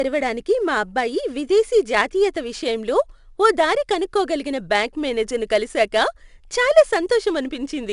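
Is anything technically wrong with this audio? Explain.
Yes. Throughout the speech, 4-bit ADPCM compression stores each sample as a coarse 4-bit step from a predicted value, adapting the step size as it goes. The error is a plainly audible gritty hiss that follows the level of the louder syllables. Nothing sits above 10.6 kHz, which points to a reduced sample rate.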